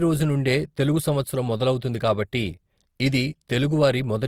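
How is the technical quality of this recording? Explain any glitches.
The speech carries plainly audible compression damage from start to finish. Throughout: grainy, rough texture on voiced sounds, likely Opus compression in its music mode, filling starved bands with noise rather than leaving MP3-style swirling holes. Bandwidth stays full to about 20.2 kHz, which fits a rate near 24 kbps.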